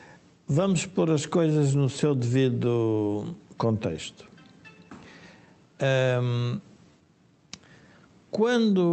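Clock drift between sender and receiver runs through the whole clip: the sending clock is roughly 5 percent slower than the receiving one, so the jitter buffer keeps draining. Unlike a single packet-loss gap, this produces small, recurring hiccups at uneven intervals rather than one isolated break.

From 0.08 s to 8.91 s, repeated timing corrections stretch the sound. The receiver keeps repeating short pieces to cover the shortfall, so playback runs at about 95 percent speed and adds roughly half a second in total. Because the repeats are small and unevenly spaced, they come across as slight hiccups and an unsteady, dragging tempo rather than the smooth pitch wobble of wow. They sit on top of the Opus call path, which keeps content up to about 8 kHz.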